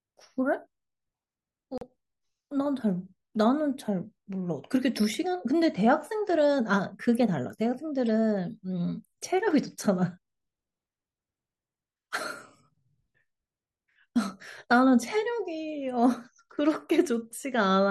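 A corrupt frame decoded at 1.78 to 1.83 s and again at 8.08 s: flipped bits in a couple of compressed frames were played anyway, misplacing energy in frequency, so each spot gives a short chirpy burst, the first louder and longer than the brief second blip.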